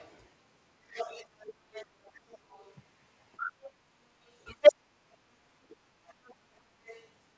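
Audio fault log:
0–0.09 s, 0.91–2.76 s, 3.37–3.71 s, 4.26–4.73 s, 6.07–6.35 s, 6.85–7.08 s: other side's voice leaking through. A second voice sits under the talker, mostly faint. Around 4.3 s it rises well above the talker. This is likely loudspeaker echo left behind by the echo canceller.
1.90–1.95 s, 5.58–5.83 s: speech suppressed in double talk. The talker dips about 15 dB for a moment, then later drops nearly out, about 35 dB down. Both sides were likely turned down while talking at once.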